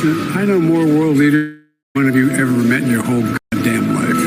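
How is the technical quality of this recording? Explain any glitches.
There is one glitch: a long network dropout from 1.35 to 1.97 s. The stream likely stopped delivering audio for about 600 ms. The receiver carried the last sound forward as a fading buzz or hiss, then dropped to 190 ms of silence, and the sound resumes with that stretch missing.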